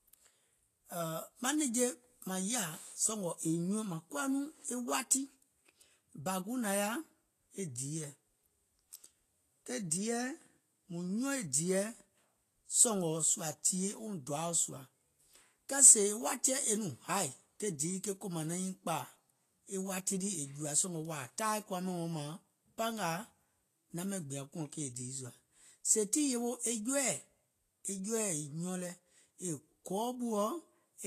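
Throughout, the speech sounds hissy and grainy, likely from Vorbis compression coarsely quantising treble. A spectrogram shows nothing above 14.2 kHz, with speckled, noisy upper bands.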